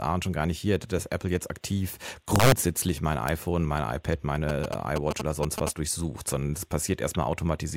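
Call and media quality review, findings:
Integer overflow, 2.36 to 2.52 s, right after "jetzt aktiv", and again at 3.28 s. Violent cracks on speech peaks, harsher than clipping. Probable fixed-point gain or mix stage without saturation. Peaks about 4 dB over full scale wrap to the opposite sign. At 3.28 s the peak only just reaches the limit.

GSM signalling bursts, 4.49 to 5.69 s, ending just before "durchsucht sondern das". Galloping ticks and short buzzes at 217 Hz, slightly below speech level. Probable source is a nearby 2G phone signalling. Its radio bursts are rectified in the analogue input and mic circuitry.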